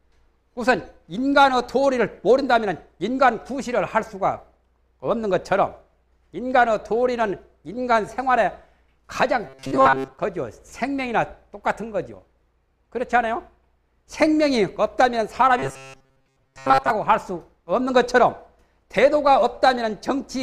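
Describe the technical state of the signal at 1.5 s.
At 1.5 s the signal is intact, with no dropout, distortion, glitch or other technical fault to be heard at that moment.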